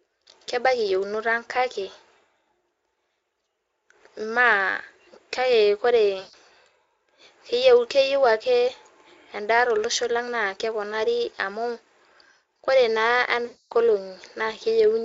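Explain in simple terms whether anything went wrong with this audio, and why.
Yes, twice: at 6.19 to 6.34 s and 13.45 to 13.73 s there is VoIP packet loss concealed by the speech codec. Data went missing, so the decoder guessed by stretching the last sound into a fading buzz or hiss, about 140 ms and then 260 ms long.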